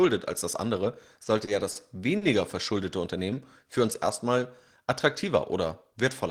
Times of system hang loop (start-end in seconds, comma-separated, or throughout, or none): none